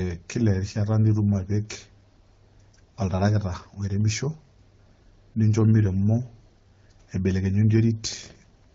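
No technical faults can be heard in this speech clip, which comes through the AMR wideband (HD Voice) codec at 12.65 kbit/s.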